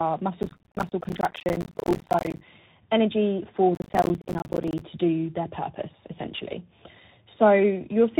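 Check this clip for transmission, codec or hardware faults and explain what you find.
Yes, there are two problems: the whole clip has been through tandem speech coding, and there are two bursts of processor overload crackle.

Tandem speech coding runs throughout. The speech sounds like it was decoded and re-encoded over several links, ending in CVSD, with each coder working on the previous one's damage. It's rougher and noisier than a single link would be, and nothing comes through above 3.8 kHz.

Processor overload crackle hits from 0.43 to 2.41 s and again from 3.75 to 4.82 s. The processor kept missing its buffer deadlines, and each miss dropped in a short silent gap. The gaps suggest buffers of around 10 ms, roughly a hundred missed in the first burst and about fifty in the second, and together they make a gritty crackle over the speech.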